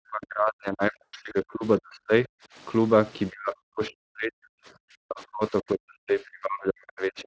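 In this speech recording, the echo canceller likely could not separate the near talker from loudspeaker echo while both sides spoke at once, so it turned both down. That speech suppressed in double talk makes the level dip by as much as about 40 dB from 0 to 2.31 s, 3.3 to 4.6 s, and 5.01 s to the end. Within the first stretch, VoIP packet loss concealed by the speech codec affects 1.04 to 1.33 s. About 160 ms of audio is missing in gaps across 280 ms, and the longest gap is 100 ms. The decoder fills each gap by extending its last pitch and spectral shape at falling gain, which stretches the sound into a buzzy tone or coloured noise that fades and stays weak briefly after the signal returns.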